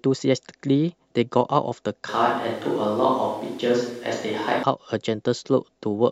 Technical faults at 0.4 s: none

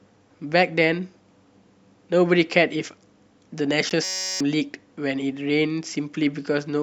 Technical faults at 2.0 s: none

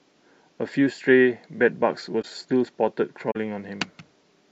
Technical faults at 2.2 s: corrupt frame concealed

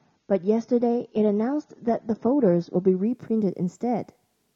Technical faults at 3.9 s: none

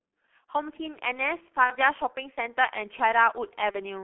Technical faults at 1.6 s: G.723.1 codec; VoIP packet loss concealed by the speech codec

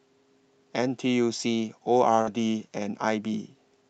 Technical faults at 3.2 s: none

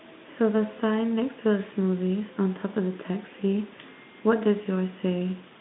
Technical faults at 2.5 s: none

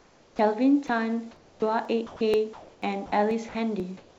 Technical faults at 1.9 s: sound chopped by the voice detector; audio missing between chunks

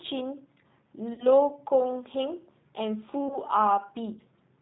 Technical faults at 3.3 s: G.729 codec; VoIP packet loss concealed by the speech codec

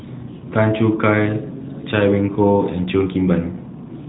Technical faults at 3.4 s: none

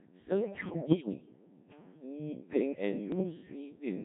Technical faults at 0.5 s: Codec 2 vocoder; bit errors on digital voice radio

